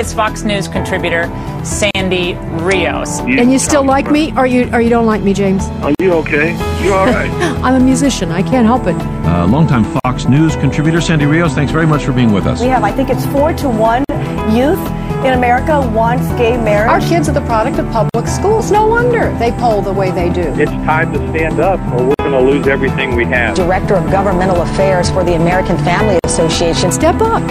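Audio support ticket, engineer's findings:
Gap at a join of encoded pieces: segments encoded separately, concatenated untrimmed; encoder start delay and last-frame padding retained. Silent dropouts about every 4.0 s at 1.91, 5.95, 10.00, 14.04, 18.09, 22.14, 26.19 s. First is 39 ms, rest 49 ms. Edges smeared by the codec; sound resumes where it stopped.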